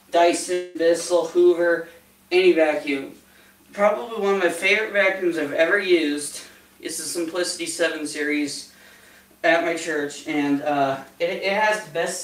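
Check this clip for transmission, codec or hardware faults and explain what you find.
One fault is present, a long network dropout near the start. From 0.53 to 0.77 s the sound stops progressing and is replaced by a continuation of the last moment, a buzz or hiss that fades over about 214 ms and never falls to silence. The audio then resumes with roughly 220 ms of material missing. The likely cause is a break in the network stream. With no data arriving, the receiver kept synthesising from what it last had, then skipped past the lost portion.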